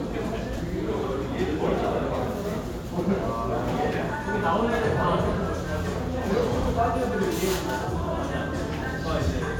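Repeated frames occur at 0.56 to 0.59 s and again at 6.62 to 6.65 s, where one block of about 26 ms, fitting a single compressed frame, plays twice. Each repeat gives a brief stutter and lengthens the audio by 26.1 ms.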